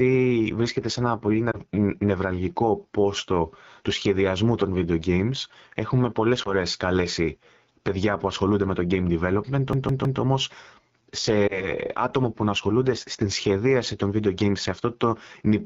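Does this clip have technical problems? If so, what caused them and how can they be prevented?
Yes. Throughout, AMR wideband (HD Voice) coding at 8.85 kbit/s makes the speech rough and raspy. A rate of 12.65 kbit/s or higher prevents this.

Lost AMR speech frames, one 20 ms frame each, cause brief dips or warbles at 1.52 s (after "βρίσκεται σε ένα"), 6.43 s (before "καλέσει παιδιά που ασχολούνται") and 11.47 s (before "άτομα που να ασχολούνται"). In each case the decoder concealed the frame by reusing old parameters. A stronger radio link prevents this.

A CD stuck on one turn repeats a 159 ms loop three times from 9.73 to 10.21 s, with short mutes at each jump. Cleaning or replacing the disc prevents this.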